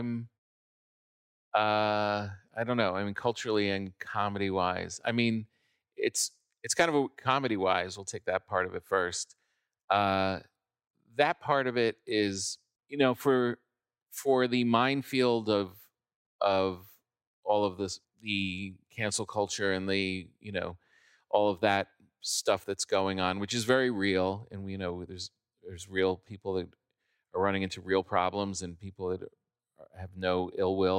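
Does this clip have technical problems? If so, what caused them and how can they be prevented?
No, nothing stood out as a technical problem on listening to this speech clip, so there is nothing to trace back or prevent.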